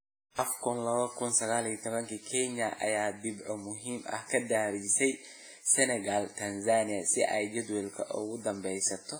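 Throughout, the speech rings and washes, with hiss breathing alongside it, which points to likely heavy WMA compression around 24 kbps. Unlike plain broadband noise, the hiss rises and falls with the speech.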